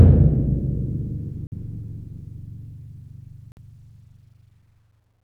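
Gaps between chunks at 1.47–1.52 s and 3.52–3.57 s: the audio arrives in 2-second pieces, and a 50 ms silence interrupts each join.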